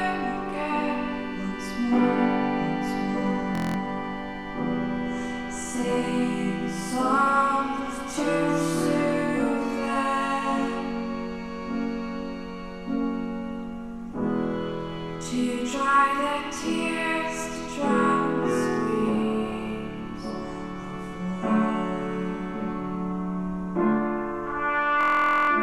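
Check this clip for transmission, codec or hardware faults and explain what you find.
Two system hang loops occur, at 3.55 to 3.76 s and at 25.01 to 25.50 s. Each time, the computer or driver stalled while the sound hardware kept replaying one 23.22 ms ring buffer, which fits a 1024-sample buffer. The first loop repeats 9 times and the second 21 times, both at 43.1 Hz, so each sounds like a steady buzz at that rate. Little or no audio goes missing. The repeats are exact copies, which sets this apart from packet-loss concealment.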